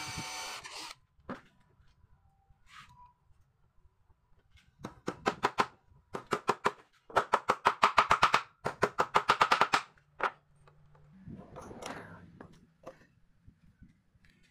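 From 11.13 s to the end, a section at the wrong speed runs 1.28 times fast and about four semitones higher, likely from a mismatched playback clock.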